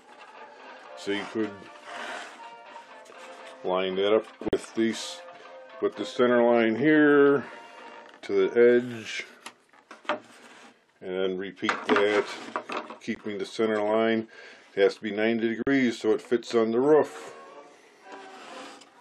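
At 4.49 to 4.53 s, 13.15 s and 15.62 to 15.67 s the sound cuts to silence for about 44, 15 and 44 ms, likely a Bluetooth dropout. Unlike a stall, playback resumes further on, as if time had kept running.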